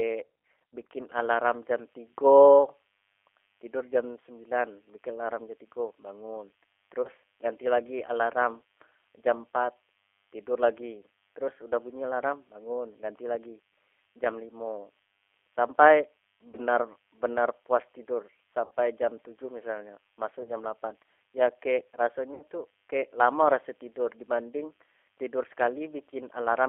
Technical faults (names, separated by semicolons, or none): G.729 codec; VoIP packet loss concealed by the speech codec